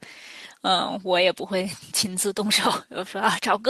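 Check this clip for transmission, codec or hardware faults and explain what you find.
The speech signal shows no audible technical fault, holding steady and continuous throughout.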